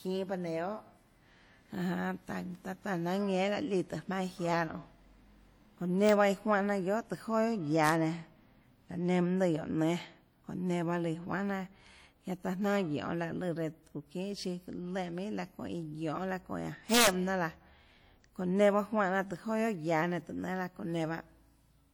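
Across the whole speech clip there is a ringing, washy quality, with hiss that swells and recedes with the talker. This is likely WMA compression: long transform blocks smear quantisation noise over tens of milliseconds, and the plainly audible damage fits a bitrate around 48 kbps.

Violent cracks break through at 6.09 s and 7.87 s, and again from 16.94 to 17.07 s, where peaks run about 2 dB over the limit. This is integer overflow: loud samples exceeded the largest integer and wrapped to the opposite extreme instead of being limited, which sounds far harsher than clipping.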